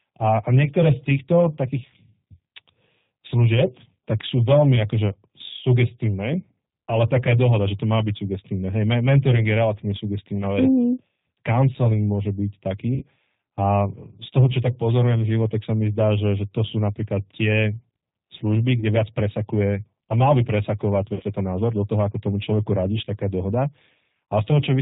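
G.729 coding runs through the whole speech clip at 8 kbit/s, and its damage is plainly audible. The codec rebuilds each 10 ms frame from a vocal tract filter, a pitch predictor and a handful of pulses rather than the actual waveform, so everything above 4 kHz is gone, sibilants sound dull, and the voice takes on a rough, slightly synthetic edge.

VoIP packet loss concealed by the speech codec first appears at 12.95 to 13.07 s, right after "môže byť". About 60 ms of audio is missing, which fits three lost 20 ms packets. The decoder stretches its last pitch and filter settings into a fading buzzy tone or coloured noise, and because each frame builds on the one before, the voice stays weak and distorted for a moment after the audio returns. A shorter gap at 18.80 to 18.84 s, between "sú napríklad tie služby" and "viac presakuje a", points to a single lost packet of about 20 ms. At 21.14 to 21.23 s, another gap of about 60 ms brings back the same drawn-out concealment and slow recovery.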